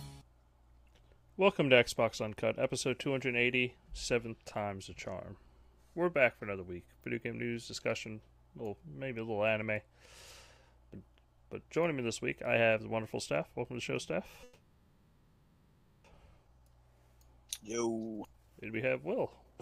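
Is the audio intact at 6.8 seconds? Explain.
Yes, the audio is intact at 6.8 seconds, with no dropout, glitch or other fault at that moment.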